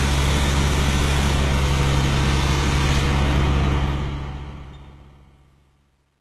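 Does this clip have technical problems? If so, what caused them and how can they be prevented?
Yes. Throughout the clip the treble has a gritty, metallic sheen, and nothing is present above about 12.3 kHz. The damage is plainly audible, and the likely cause is HE-AAC compression at a very low bitrate, around 16 kbps. That codec keeps only the lower spectrum and fakes the top by copying lower bands upward under a coarse envelope, so the high harmonics don't line up with the real ones. To prevent it, encode at a higher bitrate or use a codec that codes the full band directly.

From 3.78 s to the end at 6.21 s, the sound turns grainy as it fades, and it is worst from 4.82 s to 6.21 s. This is truncation distortion on a fade. The fade-out, which starts at about 3.8 s and runs to 6.21 s, is itself smooth, but the stage applying it keeps too few bits, consistent with about a 10-bit word length, and adds no dither. 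As the level drops toward the smallest step, the waveform collapses into a few square steps. To prevent it, apply fades at high resolution and add dither whenever the word length is reduced.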